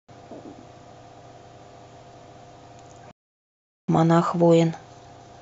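At 3.11 s the player likely ran short of data or had its output thread blocked, producing a playback stall. The speech cuts off in mid-flow and the output stays silent for about 0.77 s, until 3.88 s, when the sound resumes.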